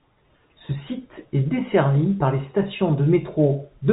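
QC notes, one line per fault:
No faults heard in this telephone-band speech.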